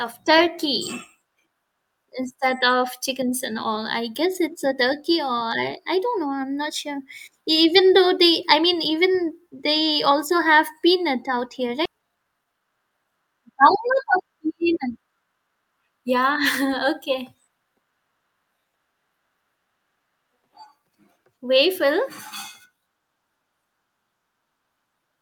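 A skip ahead at 11.85 s drops roughly 0.4 s of speech while later audio was already queued, so playback jumps forward with no gap and the two sides join almost directly. A jitter buffer speed-up from 11.95 to 13.61 s follows: with too much audio held, the receiver trims short pitch-period pieces repeatedly, removing about 0.2 s so the speech runs at 112% speed, hurried but unchanged in pitch.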